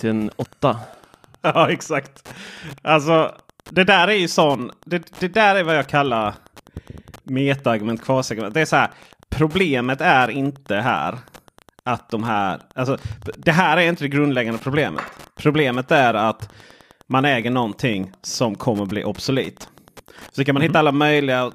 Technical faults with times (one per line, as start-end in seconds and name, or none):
0.00-21.54 Wi-Fi interference